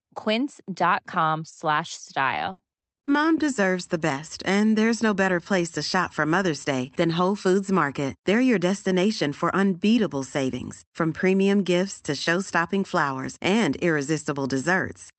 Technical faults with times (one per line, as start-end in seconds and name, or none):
1.87-3.09 repeated packet loss (robotic sound)